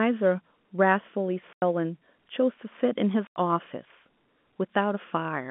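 At 1.53 s the speech drops out for 90 ms, until 1.62 s. This is packet loss filled with silence. Packets went missing in transit, and the receiver played nothing in their place. The gap has hard edges. Its length fits three 30 ms packets. The same thing happens again at 3.27 s, another 90 ms hole ending at 3.36 s. Both gaps sit inside a telephone-band line, which sounds narrow and clean around them.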